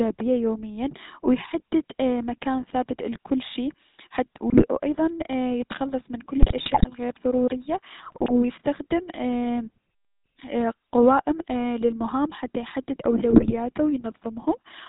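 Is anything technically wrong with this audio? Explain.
Yes. The whole clip has passed through the GSM full-rate codec, and four short stretches are hit by GSM bit errors.

GSM full-rate codec, throughout: the coder keeps only a spectral envelope plus a thinned-out train of excitation pulses, with every third sample retained, at a rate consistent with the 13 kbps full-rate scheme. Nothing above 4 kHz survives. The speech comes out band-limited and dull, with a plainly audible buzzy, gravelly grain in the voiced sounds.

GSM bit errors, at 4.5 to 4.68 s, 6.36 to 6.85 s, 8.06 to 8.31 s and 13.3 to 13.53 s: corrupted bits reached the decoder and garbled the filter, pitch and gain parameters it rebuilds each frame from. The spectrum is bent out of shape and the level jumps, so in these moments the speech breaks into squawks, pops and a gargling churn. The longest burst is the one near 6.4 s.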